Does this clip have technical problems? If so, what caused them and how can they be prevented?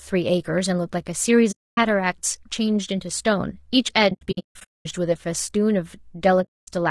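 Yes. The speech has a rough, grainy texture throughout, with a hiss-like fill between the harmonics and a top end that sounds thin and somewhat synthetic. That's low-delay AAC compression, likely AAC-ELD at a rate that fits around 32 kbps. At that rate there aren't enough bits to code the pitch harmonics properly. Running the codec at a higher bitrate would clear most of this up.

There's also AAC frame loss with muting. The sound fades out into a soft-edged gap, then fades back in, because the decoder zeroes the missing frames and the overlapping windows smooth the edges. The first gap runs from 1.51 to 1.78 s. Between 4.09 and 4.86 s the losses are scattered, adding up to about 580 ms of dropouts, with the longest single hole roughly a fifth of a second. The last gap runs from 6.43 to 6.68 s. A more robust transport, with forward error correction, retransmission or a larger jitter buffer, would prevent these losses.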